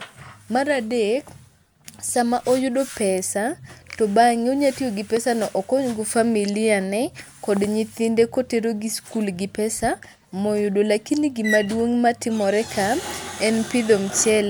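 A loud pop at 5.17–5.19 s, then a double pop at 7.57–7.66 s, each about 10 dB over the speech, likely a voltage glitch; unlike a dropout, the speech continues beneath.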